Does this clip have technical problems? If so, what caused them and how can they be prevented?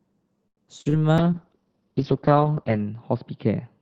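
Yes, the speech has three kinds of fault.

Short stall from a late packet, 0.47 to 0.60 s: a packet arrived late and the jitter buffer emptied, so the receiver held the last sound for about 96 ms while it waited, then picked up exactly where it left off. No speech is lost, but one sound drags on too long, and everything after it plays 96 ms later than before. Preventing it means keeping the jitter buffer deep enough to absorb the network's delay spikes.

Short concealed packet loss, at 0.81 to 0.88 s and again at 0.89 to 0.96 s: two packets, each carrying about 40 ms of audio, never reached the Opus decoder in time. Each time the decoder filled the gap by continuing the previous sound and then crossfaded back into the real signal. The result is two quick smeared wobbles close together, and whatever was in those 40 ms slices is gone. Enabling Opus in-band forward error correction or retransmission would recover such lost packets.

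Call bitrate drop, from 1.21 s to the end: the bandwidth estimate collapsed, and the encoder was pushed down to a much lower rate, which fits a fall from around 40 kbps to roughly 7 kbps, where it stays for about 1.6 s. Coded that sparsely, the speech turns rough and watery, and the audio bandwidth narrows from 8 kHz to 6 kHz, so the top end sounds duller. Setting a sensible minimum bitrate and steadying the link's congestion control would limit how far it falls.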